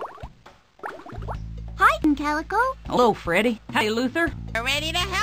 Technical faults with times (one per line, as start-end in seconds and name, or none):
2.04 dropped buffer (overrun)
2.97 dropped buffer (overrun)
3.81 dropped buffer (overrun)
4.55 dropped buffer (overrun)